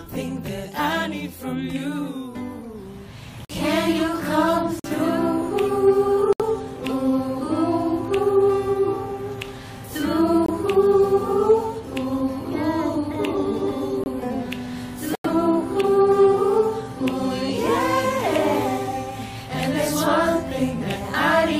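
At 3.45, 4.80, 6.33, 10.45, 14.04 and 15.13 s the sound abruptly drops to silence for 40 to 130 ms. These are corrupt frames muted: the decoder rejected damaged compressed frames and the player filled them with silence. The gaps fit two to five frame lengths each, and timing stays intact.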